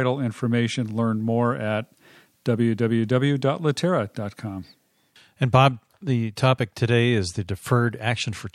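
At 6.36 s, just before "today is the", there is pre-echo. A hiss about 16 dB louder smears 14 ms ahead of the attack, fitting a 26 ms block without short blocks.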